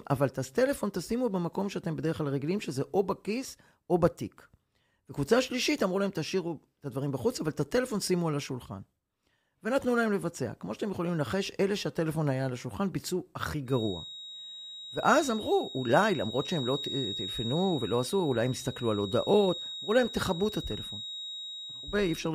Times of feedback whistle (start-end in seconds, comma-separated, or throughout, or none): 13.65-22.35